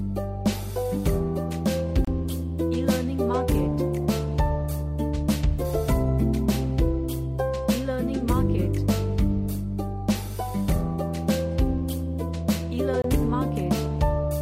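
The audio drops briefly to silence twice, from 2.05 to 2.08 s and from 13.02 to 13.04 s, gaps of 28 and 25 ms before it resumes. These are likely Bluetooth stalls, where interference delayed packets and the headphones' buffer ran empty until retransmissions arrived.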